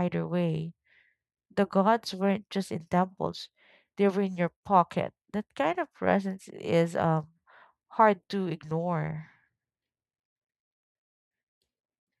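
Nothing stood out as a technical problem on listening to this speech recording.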